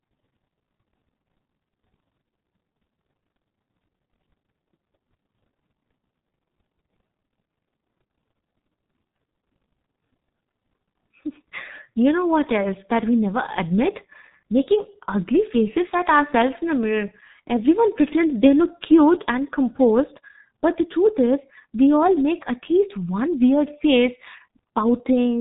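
From start to finish the speech carries heavy G.723.1 codec damage: nothing gets through above about 3.8 kHz, so it's muffled, and the slow-updating voice model leaves it hoarse with smeared consonants. That level of mangling points to its 6.3 kbit/s mode.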